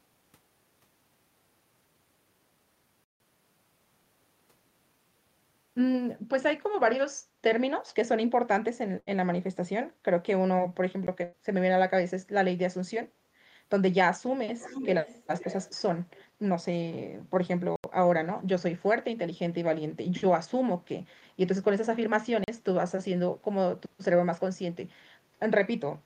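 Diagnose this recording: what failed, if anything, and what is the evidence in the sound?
The speech drops abruptly to dead silence and back: a 160 ms hole at 3.04 s, a tick at 11.07 s, 80 ms at 17.76 s and 40 ms at 22.44 s. These are blocks of digital silence at the driver or buffer stage, most likely where the output buffer went unfilled and was zeroed.

At 8.99 to 9.16 s and 11.24 to 11.36 s the last sound is held and fades, then the speech resumes with material skipped, about 80 ms and 100 ms lost. This is a burst of packet loss on the network, which the receiver masked by extending and fading the last sound.

From 14.59 to 15.82 s a delayed copy of the speech trails it by about 400 ms at roughly 10 dB down, with a much fainter scrap at 16.15 to 16.25 s, around 30 dB down. This is likely an echo leak in call processing, where a far-end loudspeaker's sound slipped past the echo canceller.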